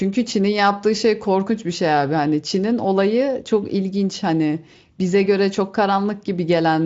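No faults are audible anywhere in this recording.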